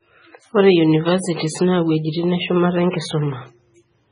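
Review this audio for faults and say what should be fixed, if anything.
Watery, swirly speech throughout, cut off above 10.4 kHz: likely MP3 compression so starved of bits, fitting about 16 kbps, that weak frequency components flicker. Keep an uncompressed or lossless master and encode at a much higher bitrate.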